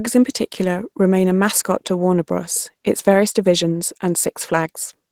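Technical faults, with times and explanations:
Throughout, Opus voice compression: the speech has that low-rate Opus character, a bit hoarse and faintly robotic, with the damage plainly audible. It sounds like hybrid mode, where a linear-prediction coder handles everything up to 8 kHz and a transform layer fills in the top. At something like 16 kbps there aren't many bits for the excitation signal, so the voicing gets rough.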